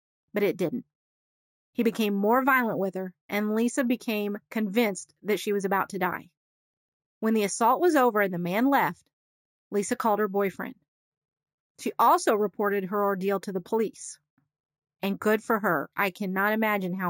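The clip is speech, and imaging from sample-and-hold upsampling runs through its whole length. A metallic fizz sits above the normal speech band, with the first mirror image of the spectrum occupying 8 to 16 kHz at about 20 dB below the signal, and it rises and falls with the speech level. This points to audio originally at 16 kHz being raised to 48 kHz by repeating each sample three times without an anti-imaging filter.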